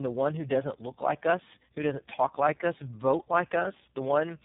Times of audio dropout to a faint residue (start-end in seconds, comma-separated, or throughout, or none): none